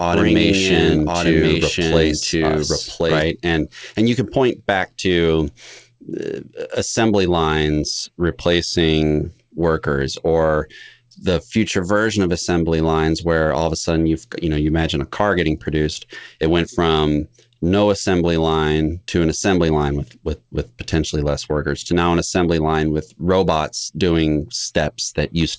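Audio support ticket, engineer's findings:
Doubled audio track, 0.00–3.22 s, already present at clip start. Full-band second copy of the speech about one second behind, at roughly equal level, dry with no room colour, stops abruptly at 3.22 s. Likely a second capture via slower path or misaligned edit. Call path (G.722, 64 kbps) shows nothing above 8 kHz on both copies.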